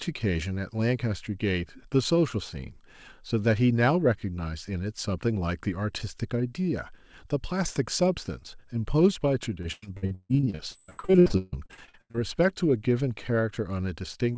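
From 9.62 s to 12.16 s the speech turns choppy and robotic, with pieces dropping out. This is repeated packet loss: about two dozen gaps, the longest 147 ms, each patched by stretching the last sound, so nearly half this stretch is filled in.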